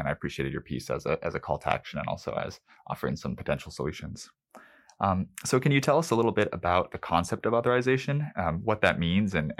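Nothing stood out as a technical fault on listening to the speech in this recording.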